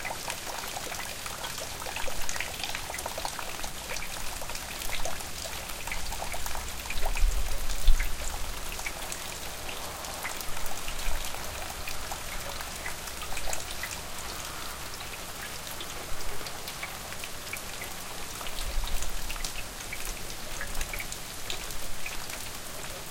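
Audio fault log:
No fault to log for this audio.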